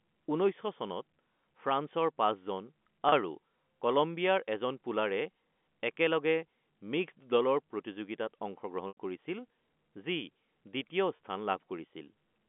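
Speech heard over a telephone line that stops near 3.4 kHz, with packet loss with pitch repetition at 3.09–3.12 s, 8.88–8.97 s and 11.16–11.19 s. The two 30 ms gaps, each fitting one lost packet, become a briefly held, buzzy tone. The 90 ms gap, consistent with about three consecutive packets, fades to silence before speech cross-fades back. A waveform shows identical repeated cycles, and a spectrogram shows frozen, flat harmonics, tapering to blank in the longest gap.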